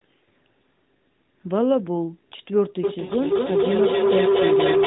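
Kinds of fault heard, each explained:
Feedback howl: sound leaks from loudspeaker back into microphone, gaining level each trip. From 2.84 s a tone near 400 Hz swells to about 4 dB above the speech, the loop repeating roughly every 200 ms. A spectrogram shows a bright horizontal band, and the waveform shows a swelling envelope.
Lost AMR speech frames: from 3.06 to 3.13 s the decoder bridges a 40 ms gap, which fits two failed 20 ms frames, by reusing the last good settings at falling gain. It is heard as a brief smeared dip, a short waveform sag and a faded spectrogram patch.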